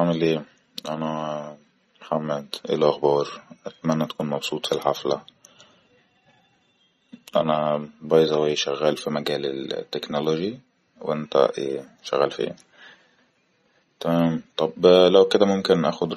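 A speech recording carries plainly audible MP3 compression damage from start to finish, likely from encoding at a low bitrate that fits roughly 34 kbps. With too few bits, the encoder drops weaker frequency lines frame by frame, so the speech takes on a watery, swirling texture, s sounds chirp metallically, and onsets smear. On a spectrogram, nothing appears above a hard ceiling at 16.3 kHz, and the upper bands show patchy, flickering holes.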